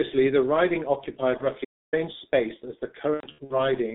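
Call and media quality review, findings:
G.723.1 codec, whole call: muffled, hoarse speech, blurred consonants, band about 150 Hz to 3.7 kHz; coarse 30 ms frame modelling fits a 6.3 kbit/s low-rate mode.

VoIP packet loss concealed by the speech codec, 1.37–1.48 s and 3.14–3.63 s: decoder extrapolates last pitch/filter, buzzy or noisy fading fill. First gap fits one 30 ms frame. Second fits about 210 ms lost across 360 ms, longest run 90 ms, with weak recovery.

Playback stall, 1.64–1.94 s: output silent for about 280 ms mid-flow, then resumes; likely player buffer underrun or blocked audio thread.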